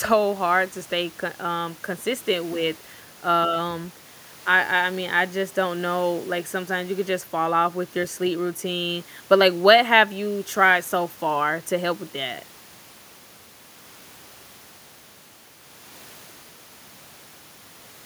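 Nothing goes wrong anywhere in this speech recording, so there's no technical fault to point out.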